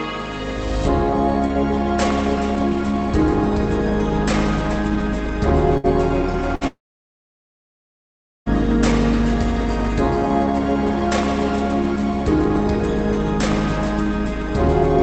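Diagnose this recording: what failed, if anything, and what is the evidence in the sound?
A burst of packet loss hits the network stage twice, at 5.77 to 5.86 s and 6.55 to 6.64 s. Each time the last sound is stretched and fades for about 60 ms. The audio then resumes, with roughly 60 ms skipped. The receiver's concealment is filling gaps left by missing packets.

From 6.67 to 8.49 s the audio stops for about 1.8 s. The last sound is carried only briefly, then near-silence holds for about 1.7 s. The audio returns further on, with that whole stretch gone. This is likely a long network dropout. The receiver ran out of material to conceal with. The Opus call path keeps its 8 kHz upper limit around the gap.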